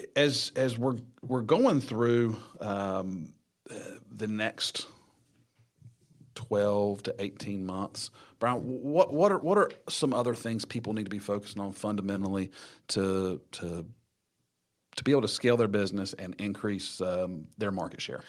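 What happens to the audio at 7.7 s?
Nothing goes wrong at 7.7 s: the speech runs through that moment intact, with no dropout, click, distortion or other fault to be heard.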